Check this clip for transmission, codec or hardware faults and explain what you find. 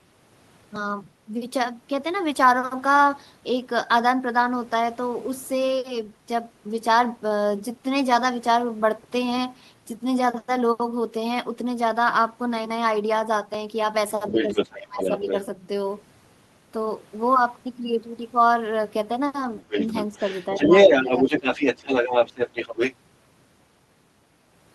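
There are two echo-related problems here, both clustered in the second half of the speech.

First, the other side's voice leaking through, from 14.29 to 15.41 s and again from 19.58 to 22.95 s. The far talker's voice comes back through the mic, likely because the device's echo canceller didn't fully remove what its loudspeaker was playing. The first patch sits at about the same level as the talker. The longer second stretch is around 5 dB louder than the talker, so it really competes.

Second, speech suppressed in double talk, overlapping those same leaks: 14.3–14.61 s, 14.77–15.26 s, 20.13–20.17 s, 20.5–20.71 s and 21.02–21.25 s. With both sides talking at once, the canceller likely couldn't tell its own talker from the echo and pulled everything down. Most dips are shallow, around 5 dB, but the one at 14.77–15.26 s drops by about 25 dB for a few hundred milliseconds, so the talker nearly vanishes there.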